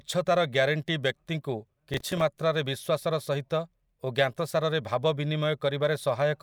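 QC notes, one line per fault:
1.94–2.21 s, processor overload crackle: right after "ଗ୍ୟାରେଣ୍ଟି ବ୍ୟକ୍ତିକୁ" the speech picks up a short burst of gritty, tearing crackle lasting a little over a quarter of a second. The processing fell behind and missed a run of buffer deadlines, around seven of them. Each miss was filled with a stale fragment of earlier audio about one buffer long, roughly 5 ms, so hard-edged splices break into the speech. The crackle clears once the load drops.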